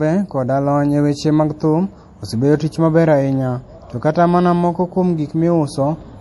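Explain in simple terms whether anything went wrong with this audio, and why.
Throughout the speech, the sound is dulled, with nothing above about 11.5 kHz, and has a watery, swirling quality, especially on s sounds. That points to likely MP3 compression: short of data, the encoder cut the top off and kept flickering faint details on and off.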